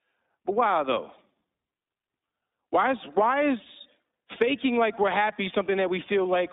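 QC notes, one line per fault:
throughout, iLBC codec: the speech is held to a narrow telephone band of roughly 200 Hz to 3.7 kHz, and it sounds plainly rough and slightly synthetic. Each 20 ms frame's excitation is coded on its own, with nothing carried over from the previous frame, at a rate that fits 15.2 kbps. That makes the texture grainy. On a spectrogram, energy stops sharply near 3.7 kHz and thins below 200 Hz.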